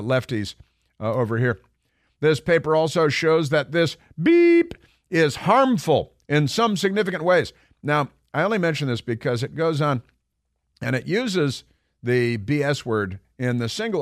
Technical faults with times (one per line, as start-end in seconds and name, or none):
3.20 dropped samples